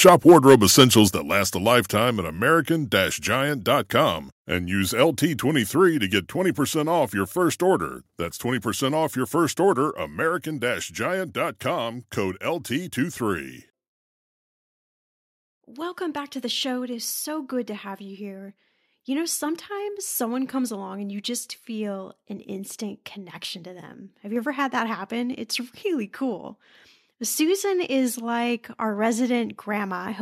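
In this speech recording, the input was likely driven about 6 dB past the converter's limit from 0.05 to 1.01 s, and this microphone overload flattens about 3 percent of samples into a harsh crackle before "that last a". The software also likely stepped the microphone volume down at 0.09, 1.08, 6.18, 8.25 and 10.29 s, by about 2, 5, 1, 1 and 2 dB, so the level drops abruptly, including just after "off your first order".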